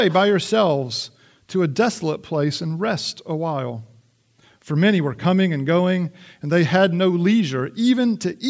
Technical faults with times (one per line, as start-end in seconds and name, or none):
none